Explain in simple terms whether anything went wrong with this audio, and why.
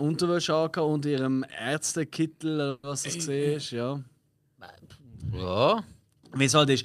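Yes, a call audio freeze. At 2.69 s the speech stalls for about 0.16 s with a fading buzz. Delayed packets likely caused it. Speech resumes at "was das", with nothing lost.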